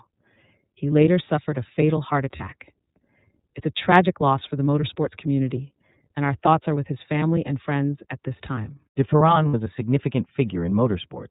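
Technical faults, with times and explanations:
throughout: iLBC codec. The speech passed through a narrowband iLBC coder, consistent with its 13.33 kbps mode and 30 ms frames. Each frame's excitation is coded independently and nothing above 4 kHz survives, so the speech sounds plainly rough, muffled and slightly synthetic.
2.36–2.41 s and 9.48–9.55 s: lost iLBC frames. Packets went missing, about 30 ms and then 60 ms of audio, which fits one lost frame and then two. The decoder filled each gap by repeating the last pitch cycle blended with noise, heard as a brief held, buzzy vowel, and the speech recovers almost at once.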